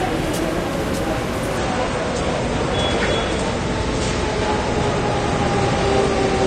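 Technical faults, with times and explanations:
1.57 s to the end: adaptive stream at a lower bitrate. The top end suddenly disappears, with nothing above 9 kHz, and what remains sounds thinner and grainier, with more smearing and swirl from the codec. There is no gap at the switch. The player jumped to a cheaper encoding when its connection slowed, and the brighter quality before the switch fits roughly 96 kbit/s AAC, while the dull stretch afterwards points to about a third of that.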